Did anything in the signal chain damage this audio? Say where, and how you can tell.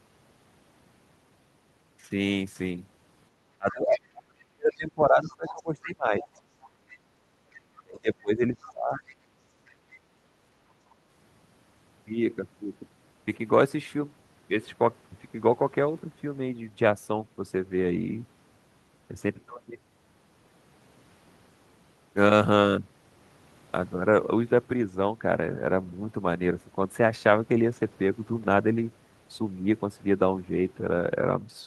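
Yes, in call processing. Speech suppressed in double talk at 3.58–6.54 s and 7.8–9.14 s: the voice drops by up to around 35 dB, likely because the echo canceller cut both talkers during overlap.

The other side's voice is leaking through at 3.71–4.0, 4.72–5.63, 6.21–6.98, 7.53–7.83, 8.6–9.15 and 9.68–9.98 s, about 20 to 30 dB below the speech. This is likely residual loudspeaker echo that the canceller left in.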